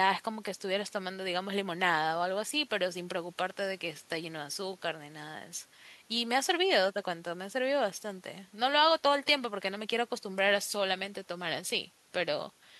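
No technical faults are audible.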